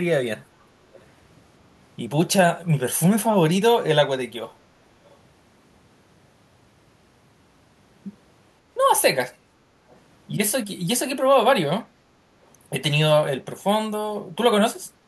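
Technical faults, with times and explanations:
0.94–1.02 s and 5.10–5.16 s, echo leak: two brief, faint scraps of the voice return about 483 ms after the original, the first roughly 30 dB below the speech and the second roughly 35 dB below. The likely cause is a far-end loudspeaker whose echo canceller let a residue of the played-back signal through its microphone and sent it back. The canceller suppressed most of it, so only short, quiet fragments survive rather than a sustained copy.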